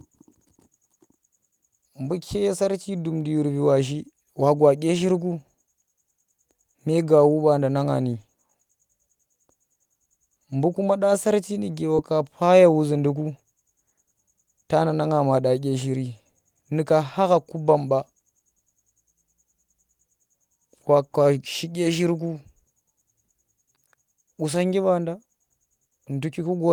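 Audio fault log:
11.95–11.99 s, short concealed packet loss: Between "kuma dya sarci nuge" and "pa ye wuzhinduku" the speech briefly smears and wobbles, as if the sound were stretched for an instant before blending back. About 20 ms of audio arrived too late for the decoder, so the receiver synthesised roughly 19 ms of stand-in sound by extending what came just before. It then crossfaded back into the real signal, which leaves this short blurred seam.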